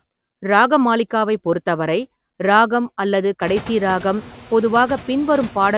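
Right from the start there are noise suppressor artifacts running through the whole clip. The suppressor pulls down whatever bands it reads as steady noise, by about 15 dB here, so the background drops away in the gaps and comes back up under the speech. That pumping gets more obvious after the room noise climbs, roughly at 3.5 s. The audio also stops at 4 kHz, which fits a narrowband call codec.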